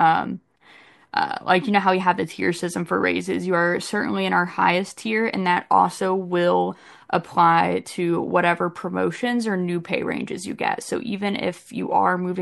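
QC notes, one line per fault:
No faults found in this speech recording.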